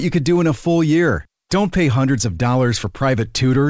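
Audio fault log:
No faults are present. The speech has come over a WebRTC call path using the G.722 codec at 64 kbps, so nothing is heard above 8 kHz.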